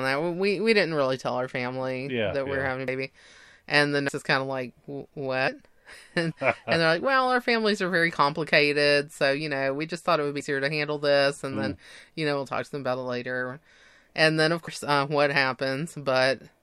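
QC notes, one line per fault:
2.88 s, 4.09 s, 14.68 s: dropped buffer (overrun). Each is the speech jumping ahead, with no gap. Roughly a tenth, a fifth and three tenths of a second go missing. The likely cause is audio overwritten before capture, so the two sides are joined directly.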